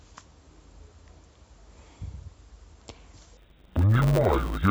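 From 3.37 s to the end at 4.71 s, the speech turns dull and robotic, with a steady buzz at 100 Hz. This is interleaved audio read as planar. Each 10 ms block of alternating left and right samples was split into a first half and a second half, and each half was played as one channel at half speed. Unlike a sample-rate mismatch, the pace stays correct, and the short blocks give the buzz rather than a clear octave drop.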